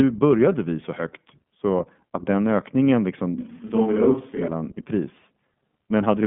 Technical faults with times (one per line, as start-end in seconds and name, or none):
0.00-6.26 iLBC codec
3.38-4.48 switch to a distant microphone